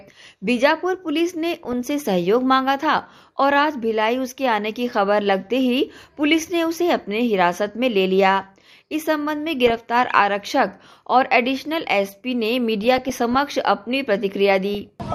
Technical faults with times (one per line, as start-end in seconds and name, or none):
1.65-1.88 DAB burbling
9.54-9.77 DAB burbling
12.81-13.39 DAB burbling
14.75-14.89 DAB burbling